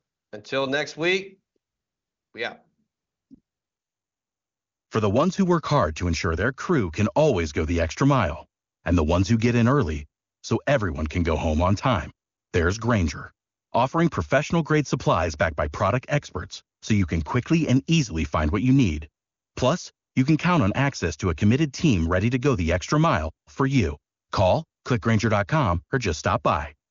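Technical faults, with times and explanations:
The speech carries no technical faults: it has passed through an AMR wideband (HD Voice) link at a high rate that fits 23.85 kbit/s, and nothing in it lies above 7.2 kHz, just past that codec's 7 kHz band edge.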